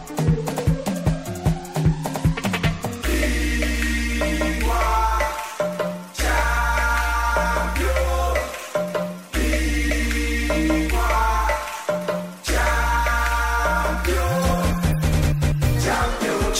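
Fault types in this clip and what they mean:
Dropped buffer (overrun): a skip at 9.90 s and 14.49 s where the sound jumps ahead, likely from samples overwritten before being read, losing roughly 15 ms and 5 ms.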